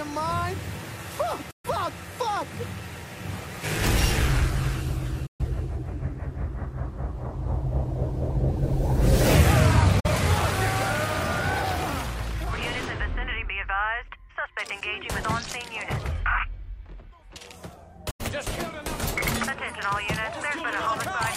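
The audio mutes four times in a digital broadcast dropout, at 1.51–1.69 s, 5.26–5.45 s, 10.00–10.09 s and 18.10–18.24 s. Each time the receiver failed to decode incoming frames and silenced its output, with gaps consistent with losing one to three frames of roughly 43 ms each. The sound fades out over 8 ms, the material during the gap is lost, and the sound resumes later in the programme. A waveform shows sharp, brief flat lines, and a spectrogram shows clean vertical blank bands across all frequencies.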